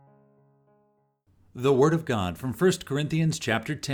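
Nothing technically wrong can be heard in this audio. There are no faults to report at any point in the clip.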